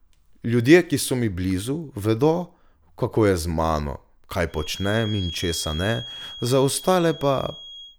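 From 4.46 s to the end, a feedback whistle sits well below the speech: a thin, steady 3.3 kHz tone that swells and fades slowly in level. A loudspeaker-to-microphone loop held just at the feedback point is the likely cause. Unlike a runaway howl, it never builds up.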